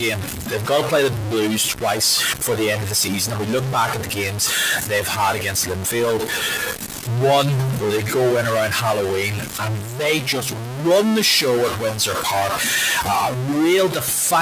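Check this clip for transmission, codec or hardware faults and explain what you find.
Two faults are present. One is heard throughout the clip, and the other recurs across nearly all of it.

Stuck bit: A distortion rides on the speech from start to finish. Pauses fill with a gritty noise instead of falling quiet. The likely cause is one data bit held at a fixed value by a broken line or converter. That bit then shifts about half the samples by its weight.

Speech cut by the noise suppressor: This happens from 0.0 to 2.01 s, 2.33 to 7.1 s, 7.43 to 12.61 s, 13.02 to 13.56 s, and 13.88 to 14.33 s. The suppressor mistook parts of the speech for noise. It pulled them down by up to about 12 dB, and by about 9 dB in the last two spans. Soft consonants and word endings sound swallowed and faint. About eight seconds of speech is affected in total. The room noise beneath sits about 22 dB under the speech.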